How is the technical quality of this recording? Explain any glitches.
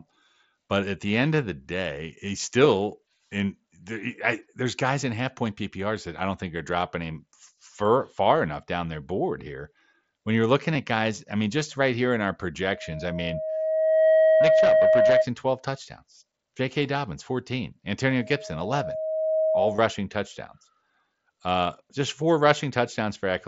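The recording has two faults, a recurring feedback squeal and brief dropouts, over a wideband mSBC headset link whose light graininess on loud speech is audible.

Loudspeaker feedback squeal, 12.62 to 15.29 s after "right here in our", and again 18.08 to 19.90 s: the microphone picks up its own loudspeaker, and a 633 Hz tone builds over about a second and a half, peaking at about 10 dB above the speech, then about 5 dB.

Concealed Bluetooth headset packet loss at 10.74 s, between "you're looking" and "at guys I mean", at 15.08 s, and from 19.76 to 19.78 s: headset packets went missing and the receiver filled the gaps with recently heard waveform. The 15 ms, 7.5 ms and 22.5 ms gaps fit whole 7.5 ms frames. The single lost frame at 15.08 s is nearly hidden; the longer runs leave a brief buzzy tone with a slight warble as the speech resumes.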